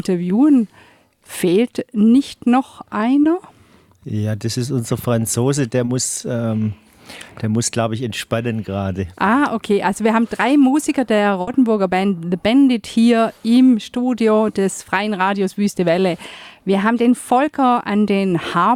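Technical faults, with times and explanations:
3.23–3.27 s and 5.85–5.89 s, short concealed packet loss: each time about 20 ms of audio failed to arrive in time, and the decoder bridged the hole by extrapolating the preceding sound before crossfading back. This leaves a brief smear or wobble at each point.
11.41–11.49 s, burst of packet loss: roughly 60 ms of consecutive audio was lost. The receiver stretched the last sound across the gap while fading it down, giving a short held buzz or hiss. Playback then resumes with that stretch of the original missing.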